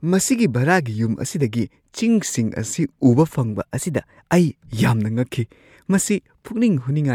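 From 3.51 to 4.21 s, after "ꯑꯁꯤꯗꯒꯤ ꯆꯤꯡꯁꯤꯡ ꯑꯁꯤ ꯎꯕ", a drift correction step speeds the speech up by 6.34% and raises its pitch by 106 cents. The cause is likely a clock-sync rate jump. On a spectrogram the harmonics step up, then drop back before "ꯑꯩ ꯌꯥꯝꯅ".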